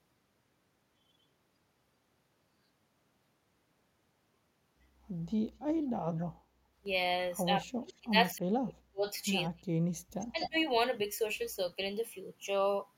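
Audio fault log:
6.18 to 10.49 s, echo leak: A faint delayed copy of the talker comes back at 6.18 to 6.26 s and 7.88 to 7.94 s, about 25 to 30 dB below the direct sound. At 10.2 to 10.49 s it returns much louder, only about 5 dB down. Every return lags by a steady 245 to 249 ms. That fixed quarter-second delay likely means the far end is on a loudspeaker and its echo canceller is letting part of the pickup back down the line.
7.63 to 10.57 s, speech suppressed in double talk: The loudspeaker-side voice falls away in four patches, at 7.63 to 8.15 s, 8.34 to 9.07 s, 9.47 to 9.79 s and 10.32 to 10.57 s. The first three dips are deep, roughly 35 to 40 dB, enough to gap the sound almost completely. The last is shallower, around 15 dB. The first and last drops overlap the echo bursts, and these drops likely come from the far-end canceller failing to separate its own talker from the loudspeaker echo while both sides talk, and turning both down.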